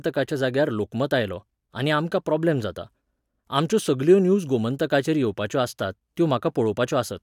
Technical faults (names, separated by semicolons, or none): none